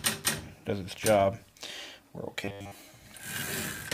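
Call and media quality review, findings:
Robotic sound from repeated short buffers, 2.45–2.79 s. Rigid metallic buzz at 100 Hz replaces the natural texture; the sound's rough contour survives. Probable component: receive-side jitter buffer or playout stage, likely starved of new audio. Mechanism: a short block, consistent with 10 ms, looped over most of the stretch while the real audio is skipped.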